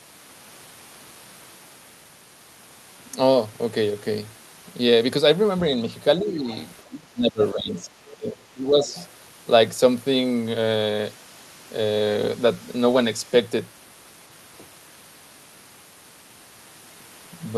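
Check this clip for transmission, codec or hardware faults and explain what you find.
Two echo-cancellation faults occur in the speech between 6.2 and 9.0 s.

Speech suppressed in double talk occurs at 6.19–6.49 s, 6.82–7.93 s and 8.12–8.86 s. The talker dips by about 10, 25 and 15 dB, likely because the canceller attenuated everything while both sides spoke.

The other side's voice is leaking through at 6.52–6.57 s, 7.71–7.82 s, 8.07–8.13 s and 8.85–9.04 s. Faint scraps sit roughly 20 to 25 dB below the talker, likely residual loudspeaker echo the canceller missed.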